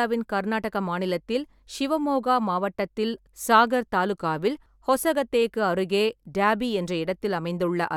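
No technical faults can be heard anywhere in the speech recording, and the signal stays steady and continuous throughout.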